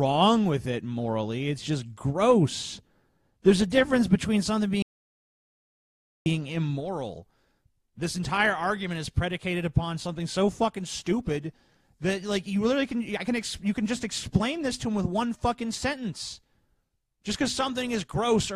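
The input feed was likely lost between 4.82 and 6.26 seconds while the recorder kept writing zeros, an audio dropout to silence. For about 1.44 seconds the sound cuts off abruptly into total silence, with no room tone, then resumes mid-flow.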